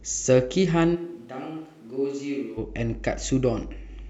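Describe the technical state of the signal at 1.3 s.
A switch to a distant microphone covers 0.97 to 2.56 s, so 1.3 s falls inside it. The speech abruptly turns roomy and hollow, with thinner bass, a drop in level of roughly 10 dB, and a room noise floor rising to around 30 dB below the speech. The likely cause is that the close microphone's feed dropped out and the recording fell back on a microphone further from the talker, until the close sound returns abruptly at 2.56 s.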